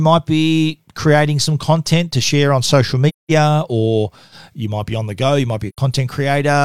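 Two soft-edged holes open in the speech: from 3.08 to 3.31 s, just after "to share on social" and before "or you might be", and again from 5.69 to 5.78 s, after "the go you might". Each fades down to silence and back. This is AAC frame loss with muting: the decoder zeroed the missing spectra, and the overlapping windows smoothed the edges. The 213 ms and 85 ms gaps fit about five and two lost frames.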